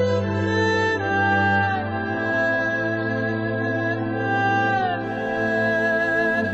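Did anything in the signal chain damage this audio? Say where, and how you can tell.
Yes. An adaptive stream starting at a low bitrate damages the opening, from 0.0 to 5.04 s. Nothing sounds above about 7.6 kHz and codec artefacts are stronger, which points to a low-rate AAC version near 16 kbit/s. The player then switches up abruptly without a gap, fitting a step to around 96 kbit/s.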